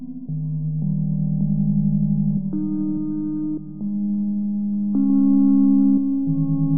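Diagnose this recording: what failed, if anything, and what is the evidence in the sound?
Nothing failed: at no point in this music recording does the sound give evidence of a fault at any stage of the chain.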